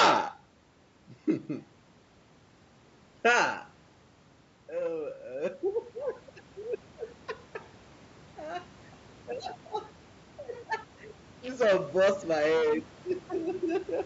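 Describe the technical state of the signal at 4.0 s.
At 4.0 s the speech signal is intact, with no technical fault present.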